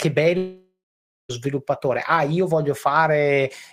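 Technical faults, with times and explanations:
0.37–1.31 s, long network dropout: the speech breaks off and the last sound is stretched into a buzzy, fading tail that dies away to near silence, leaving about half a second of quiet before the talker returns mid-flow. This is likely a run of audio that never reached the receiver. Concealment filled the roughly 0.92 s hole by extending what it last had, and the missing stretch is simply absent when playback resumes.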